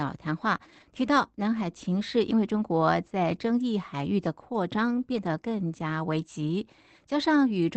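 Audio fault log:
0.57–0.60 s, short concealed packet loss: about 20 ms of the stream reached the decoder too late to be played, so the receiver covered the hole by extending the last sound for roughly 10 ms and then fading back toward incoming audio. Instead of a clean gap you hear a brief smear or wobble just before 0.6 s, where the continuation stands in for whatever was actually there.
0.60–0.82 s, 2.58–2.60 s and 5.12–5.26 s, lost packets rebuilt from error correction: in each of these stretches the original packets were lost, but the packet that followed each one carried a low-bitrate copy, and the decoder played those copies instead. Nothing drops out, but the rebuilt audio is audibly rougher and noisier than the surrounding sound. The stretches last about 220 ms, 20 ms and 140 ms. The longest one follows straight on from the concealed gap. Because the Opus call path here already stops at about 8 kHz, there is no extra loss of top end in these patches, only the grainier texture.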